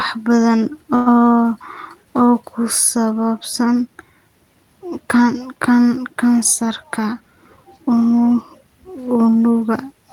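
A short stretch of speech holds still at 0.95 s: instead of moving on, the last sound is drawn out as a fading buzz until 1.09 s, and then the speech resumes exactly where it left off with nothing skipped. That call audio freeze most likely comes from packets held up in transit, leaving the jitter buffer empty. The receiver filled about 106 ms with a continuation of the previous sound, which adds 106 ms of delay to everything after it. From 6.61 s to 8.21 s the speech sounds hurried, running at roughly 107% of normal speed while its pitch stays the same. This is a jitter buffer speed-up. The buffer was holding more audio than it aims for, so the receiver trimmed tiny pitch-period-sized slices over and over until it had cut out about 150 ms, bringing the delay back down.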